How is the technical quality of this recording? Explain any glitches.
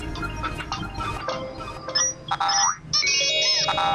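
The recording has one clear fault, a doubled audio track from 0.6 to 2.72 s. A second capture path or misaligned edit likely mixed in a copy running roughly 0.7 s late and about 5 dB quieter, producing a dry, abruptly switching echo.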